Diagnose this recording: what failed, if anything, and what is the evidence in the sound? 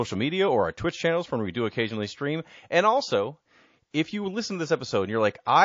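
Codec stage: the speech carries plainly audible MP3 compression, likely from encoding at a very low bitrate, with damage that fits something near 32 kbps. Weak spectral detail flickers from frame to frame, which makes the sound watery and swirly, with metallic edges on s sounds.

Codec stage, pre-echo: from 3.91 s to 3.94 s, a hiss about 11 dB above the surrounding level runs for 28 ms ahead of a sharp attack. The noise sized for the loud onset was spread across a long transform window of about 72 ms. That points to the encoder never switching to short blocks, so the attack also sounds smeared.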